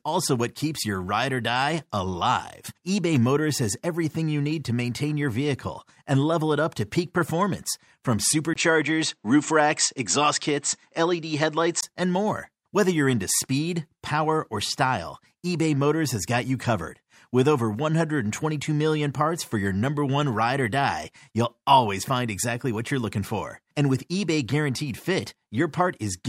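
From 8.54 to 11.83 s the speech dulls, likely an input switched to a poorer device: the spectrogram empties above 8.4 kHz, after a 20 ms waveform gap.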